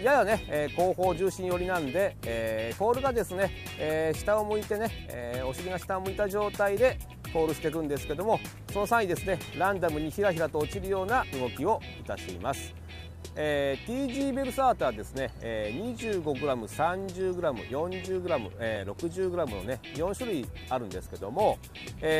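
The audio has one overlap between stream segments at 6.77 s: a few milliseconds trimmed at a 4-second segment boundary, heard as a tiny skip, seen as a waveform jump and thin broadband spectrogram line.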